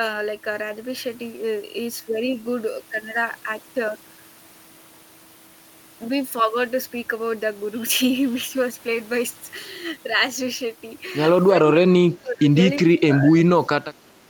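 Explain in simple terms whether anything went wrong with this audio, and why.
The speech drops sharply from 11.69 to 12.56 s, then again from 12.85 s to the end. This is speech suppressed in double talk, likely caused by an echo canceller failing to separate this side's talk from the echo of the far side playing over the loudspeaker and turning everything down.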